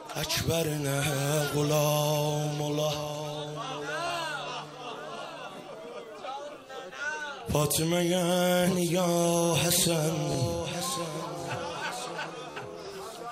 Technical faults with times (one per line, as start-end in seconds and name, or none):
4.07-4.10 Bluetooth stutter
10.32-10.35 Bluetooth stutter
12.51-12.57 Bluetooth stutter